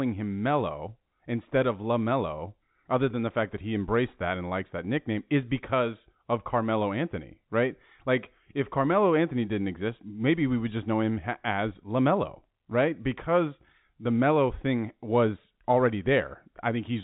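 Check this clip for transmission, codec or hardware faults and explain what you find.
No transmission, codec or hardware faults.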